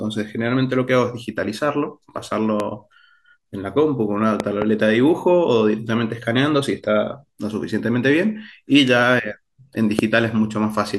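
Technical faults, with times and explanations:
2.60–2.62 s, 4.40–4.64 s and 9.99–10.01 s, loud pop: a sharp thump about 10 to 15 dB above the speech, doubled at 4.40–4.64 s, likely from a voltage step such as a switch or static. The speech continues unbroken underneath, unlike a dropout click.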